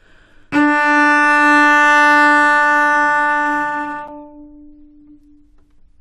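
Sound clip with a gap between stream segments: timestamps at a segment boundary, fitting 4-second segments, leave a hole, so roughly 8 ms of hard-edged silence interrupts the sound at 4.08 s.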